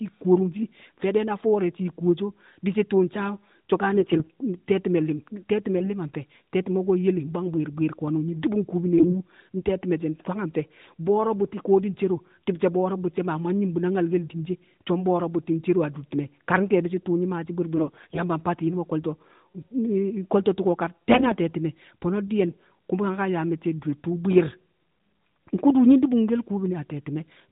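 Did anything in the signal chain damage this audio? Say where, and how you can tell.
Yes. AMR bit errors on the network link at 3.94–4.30 s, 5.78–5.91 s, 8.98–9.19 s, 17.77–18.21 s and 21.14–21.35 s: pitch and level hold, but the speech turns hoarse and gargly. Flipped low-protection bits misplace excitation pulses and skew fine gain and spectral values.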